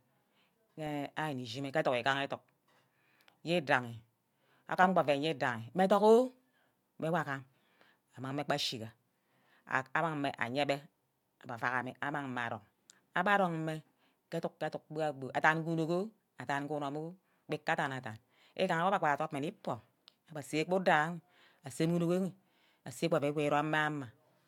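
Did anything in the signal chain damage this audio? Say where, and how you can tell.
No, nothing in the signal chain damaged this audio.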